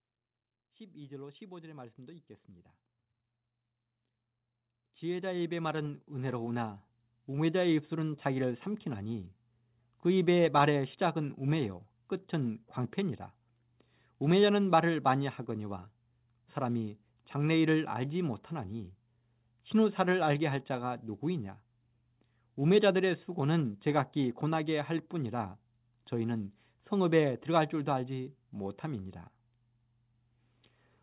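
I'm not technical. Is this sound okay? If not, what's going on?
No. From 0.58 to 10.19 s there is automatic gain rising: the level control keeps turning up the volume, so the voice and background swell together.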